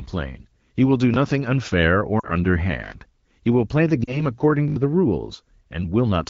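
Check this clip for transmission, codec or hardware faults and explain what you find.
Yes, there are two kinds of fault: three stutters and two brief fades in this wideband (AMR-WB) speech.

Repeated buffer, 1.14–1.16 s, 2.84–2.92 s and 4.68–4.76 s: a short stutter with hard joins, once at 1.14 s and four times in a row at the later two. Fresh audio arrived late, so the device replayed its last 20 ms buffer, dropping around 70 ms of sound at each longer repeat.

Lost AMR speech frames, 2.19–2.30 s and 4.03–4.24 s: the speech briefly smears and sags, then returns weak or rough for a moment. Two frames, 40 ms, failed their checks, so the decoder reused the last good pitch and vocal tract settings with falling gain.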